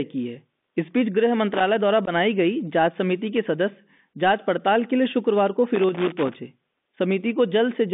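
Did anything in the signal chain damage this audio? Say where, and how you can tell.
Yes. At the codec stage, the whole clip has gone through a Bluetooth CVSD headset codec. The speech sits in a narrow 200 Hz to 3.6 kHz band, with a gritty, granular hiss and scratchy s sounds. That's one-bit delta modulation at 64 kHz whose adaptive step can't keep up with fast, bright detail.

In the analogue wiring there's loose connector crackle, a short irregular burst at 1.54 to 1.63 s and a longer one from 5.75 to 6.34 s. It sounds like a worn or dirty contact making and breaking as it moves, chopping the signal into scratchy fragments.

On the Bluetooth link there's unconcealed Bluetooth headset packet loss at 2.06 to 2.09 s. A hole about 15 ms long with hard edges cuts the speech, which suggests a handful of voice packets lost between headset and phone. Nothing filled the gap, so it just drops out.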